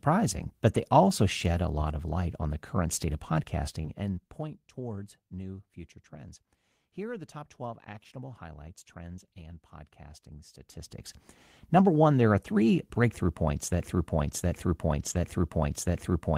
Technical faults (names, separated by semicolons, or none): short concealed packet loss; lost packet rebuilt from error correction; broken-record loop